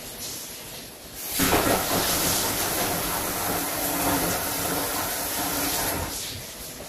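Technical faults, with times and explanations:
1.36–3.59 s, buffer tearing: a steady robotic rattle at 100 Hz rides on the sound, which points to a buffer period of about 10 ms. The writing side and the reading side of the ring buffer have drifted so they cross inside each period. About a fifth of every buffer is stale audio from roughly 30 ms earlier, spliced in with abrupt joins at both edges, and those repeated discontinuities produce the buzz.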